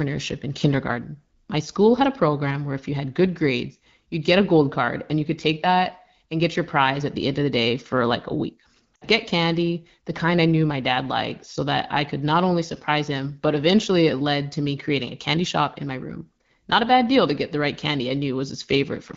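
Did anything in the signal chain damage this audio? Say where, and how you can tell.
Yes. In the radio link, AMR speech frames were lost at 8.95–9.07 s, between "for like a week" and "get candy the kind". The decoder reused the last good settings with falling gain, so the sound dropped to near silence within two frames of a gap of about 60 ms, which fits three 20 ms frames.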